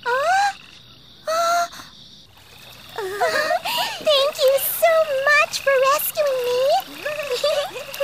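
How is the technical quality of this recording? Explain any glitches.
No glitches turn up anywhere in the recording, so there is nothing to explain. Nothing at any point interrupts or disturbs the sound.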